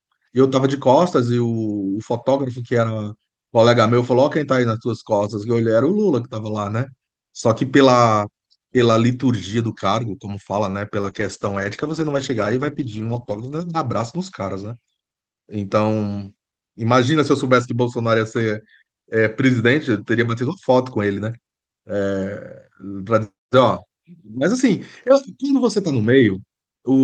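At 10.71 to 10.75 s there is a short stall from a late packet. A packet arrived behind schedule, the jitter buffer ran dry, and the receiver stretched the last sound for about 21 ms before resuming exactly where it left off. A sound is held slightly too long, with a faint buzz or dip, but nothing is lost, and the delay grows by about 21 ms. That is the difference from the next event, where audio really goes missing.

At 11.01 to 11.05 s comes a short concealed packet loss. About 20 ms of audio never reached the decoder, so the receiver extended the preceding sound by its pitch or as shaped noise and then blended back into the real signal. It is heard as a brief smear or wobble. Unlike the stall, the timing does not shift, and a short consonant-like sound can disappear entirely.

From 11.10 to 14.91 s there is a call bitrate drop. The bandwidth estimate fell, and the Opus encoder was pushed from the 32 kbps it had been using down to something that fits about 10 kbps, and it stayed at that lowest rate for roughly 2.3 s. 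The top of the band falls from 12 kHz to 8 kHz, so the sound turns muffled and rough, and it recovers afterwards. Unlike the two dropouts, this lasts seconds and changes tone rather than continuity.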